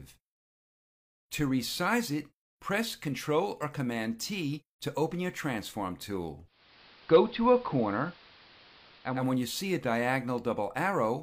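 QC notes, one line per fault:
6.45–9.33 s, digital radio blending to analogue: the receiver lost the digital stream and cross-faded over about 364 ms to the AM broadcast of the same station, then came back. There's a steady hiss sitting roughly 25 dB under the programme, and the level moves by about 1 dB at the switch.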